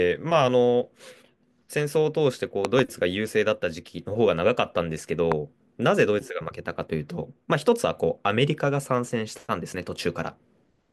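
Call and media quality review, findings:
Loud pop at 2.65–2.81 s (double) and 5.32 s (single, louder). A voltage transient, likely from a connector, switch or static discharge, summed into the signal chain; both peaks sit well above the speech, which continues underneath uninterrupted.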